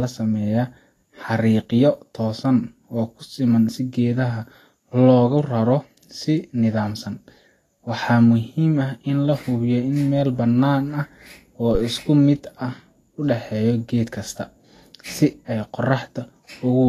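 Vorbis compression, heard throughout, is the likely cause of the grainy, hissy treble and softened consonant edges in this speech. Nothing reaches above 14.1 kHz, and the coarse quantisation of upper detail into noise sounds consistent with a low bitrate around 33 kbps.

A phantom power thump arrives from 11.75 to 11.84 s. A supply switched on or off on a live input pushed a voltage step through the coupling capacitors, heard as a short low-frequency knock that dies away quickly, within about 21 ms.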